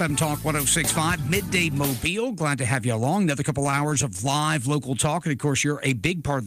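From 3.63 to 4.49 s there are repeated stalls, a stutter. Packets arrived late, so the jitter buffer kept running dry. About a dozen brief holds, each no longer than 22 ms, add about 135 ms. Nothing is lost, but the sound drags and catches.

From 4.89 to 5.53 s comes a jitter buffer slow-down. The receiver repeated single pitch periods to rebuild its reserve. This stretches the passage by 37 ms, to 95% speed. Sounds are drawn out slightly, with no change in pitch.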